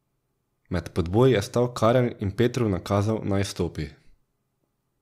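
No audible technical faults.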